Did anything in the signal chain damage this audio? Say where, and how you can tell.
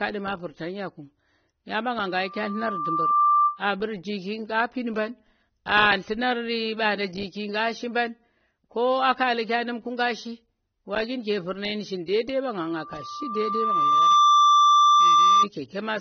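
Yes. At the codec stage there is plainly audible coding damage and nothing above 6.3 kHz, likely AAC compression at a low bitrate around 24 kbps.

At the playback loop, a loudspeaker feedback squeal at 1.2 kHz swells to about 10 dB above the speech at 2.07–3.61 s and 12.54–15.47 s. The microphone-to-speaker loop gain exceeds one there.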